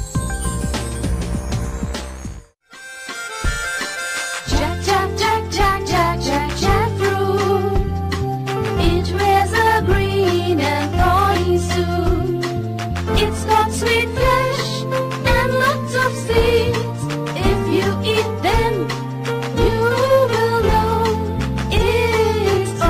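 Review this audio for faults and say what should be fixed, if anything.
Nothing needs to be fixed, because no faults can be heard anywhere in the audio.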